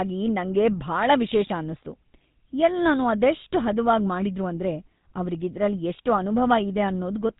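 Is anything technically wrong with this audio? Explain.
Yes. The speech carries GSM full-rate codec damage from start to finish. This early mobile codec models the vocal tract as a filter and excites it with a sparse, regularly spaced pulse train, discarding most of the excitation detail, which fits a 13 kbps stream. The result is a plainly audible buzzy, gravelly roughness on the voice. The band is also cut off hard, with nothing above about 3.8 kHz, so the audio sounds narrow and dull.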